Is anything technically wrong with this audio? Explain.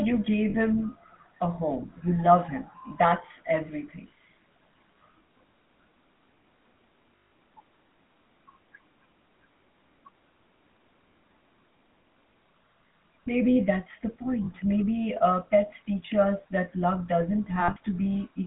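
Yes. The whole clip of speech has passed through the GSM full-rate codec, and it also has four short dropouts where GSM frames were lost.

The GSM full-rate codec is audible throughout. The band is limited to roughly 200 Hz to 3.5 kHz. The speech takes on a buzzy, gravelly roughness because the codec rebuilds the voice from a vocal-tract filter driven by sparse, regularly spaced pulses. The damage is plainly audible, and its character fits a 13 kbps GSM full-rate stream. On a spectrogram, energy stops abruptly at about 3.5 kHz, harmonics look smeared, and there is almost nothing below 200 Hz.

The lost GSM frames occur at 0.50 to 0.55 s (40 ms, just before "him a home"), 7.16 to 7.32 s (160 ms), 14.44 to 14.49 s (40 ms, just after "that's the"), and 17.60 to 17.77 s (just after "teach us that love"). That last stretch has about 120 ms of loss scattered over 160 ms, and its longest gap is around 70 ms. 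The decoder reused the last good frame's settings, so each gap becomes a rough, metallic ring. On a spectrogram these show as frozen horizontal bands, and the waveform shows a repeated pattern.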